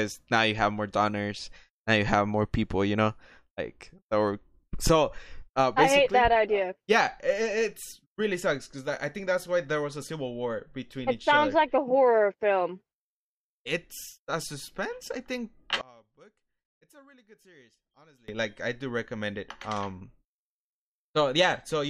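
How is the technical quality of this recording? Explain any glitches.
The recording has one clear fault. From 15.81 to 18.28 s the speech nearly disappears, falling by about 27 dB to a faint trace. The likely cause is one channel inverted: with reversed polarity, the centred content cancels when the channels are summed to mono. The waveform collapses to a sliver, and the spectrogram fades.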